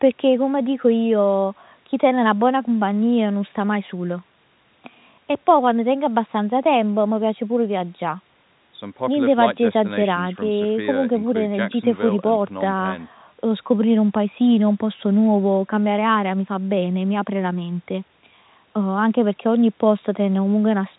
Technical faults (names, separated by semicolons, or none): none